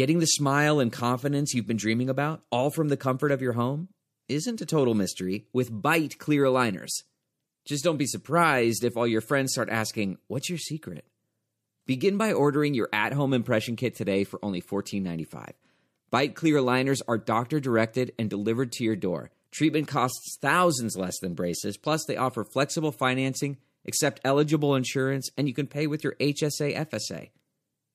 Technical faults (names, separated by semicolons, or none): pre-echo